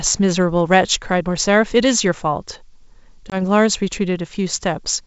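Packet loss on an ADPCM call strikes this speech clip from 3.30 to 3.37 s. Roughly one packet, about 20 ms of audio, drops out as a hard-edged silent hole. Afterward, the decoder's adaptive predictor and step size no longer match the sender's, so the sound comes back mistracked and distorted until it resettles. The wideband G.722 coding carries the speech up to 7 kHz.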